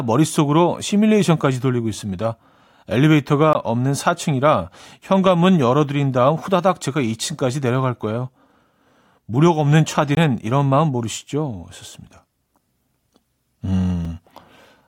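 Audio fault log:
3.53 s, 10.15–10.17 s and 14.05 s: block of digital silence. The 18 ms and 20 ms gaps at 3.53 s and 10.15 s are long enough to hear as a brief hole. The 5 ms gap at 14.05 s is heard as a tick or dip. In each case a run of samples was replaced by zeros. The signal drops straight to silence and jumps back with no fade.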